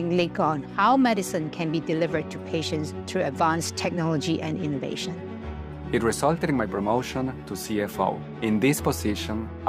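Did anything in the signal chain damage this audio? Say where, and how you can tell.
No, nothing in the signal chain damaged this audio.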